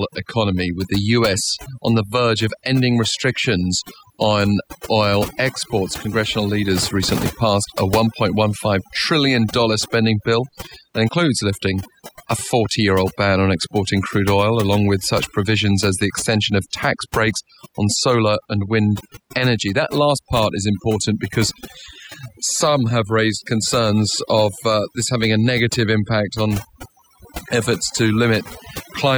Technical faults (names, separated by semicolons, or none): overdone noise removal